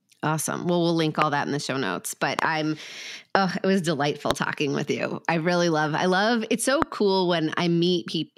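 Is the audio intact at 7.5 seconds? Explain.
Yes, at 7.5 seconds the audio is intact, with no audible dropout, click, distortion or other fault at that point.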